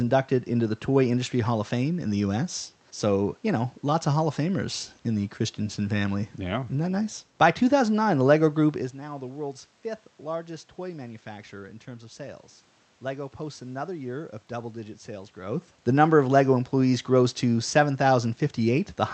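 Speech recording with no audible technical faults.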